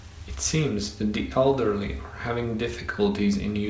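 Nothing's wrong here, really: it's speech that came over a G.722 call at 64 kbps, so there's nothing above 8 kHz, and a little room noise sits about 37 dB under the speech, which is simply how this call path and room sound.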